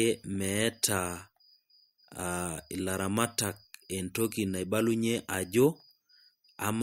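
No technical faults are audible.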